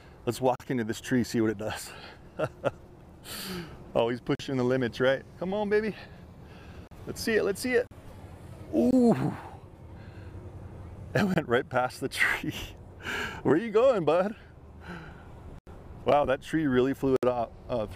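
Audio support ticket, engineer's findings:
Block of digital silence, eight dropouts: 0.56, 4.35, 6.87, 7.87, 8.91, 11.34, 15.59, 17.16 s. Hard-edged holes of 21 to 85 ms. Several fit 1024-, 2048- or 4096-sample buffers at 48 kHz. Likely output buffer underrun: the audio callback misses its deadline and zeros go out.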